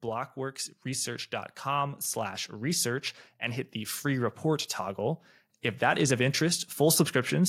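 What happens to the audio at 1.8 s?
At 1.8 s the level is still climbing: speech and background noise swell together, part of a slow automatic gain rising that runs from 0.05 to 5.26 s and adds about 8 dB. The gain control judged the input too quiet and kept raising amplification.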